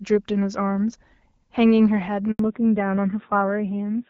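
A speech recording with a handover gap at 2.31 to 2.39 s. The sound cuts out for 80 ms while the call switches networks, and nothing said then survives. From 2.39 s there is a fallback to narrowband. The clear HD Voice sound before this suits wideband AMR at about 12.65 kbit/s. Afterwards everything above 4 kHz is gone, and the voice turns dull and rough, which fits a low-rate narrowband codec.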